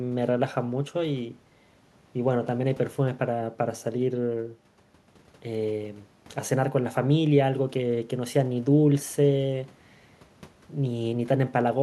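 No technical faults occur in the speech at any point, so there are none to describe in time order.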